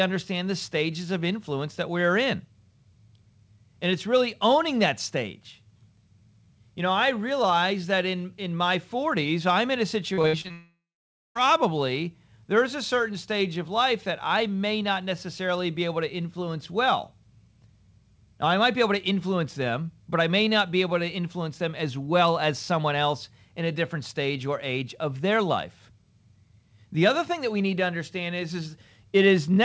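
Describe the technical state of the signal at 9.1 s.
At 9.1 s the signal is intact, with only the ordinary G.722 call-path coding audible and nothing above 8 kHz, as the wideband codec's band limit imposes.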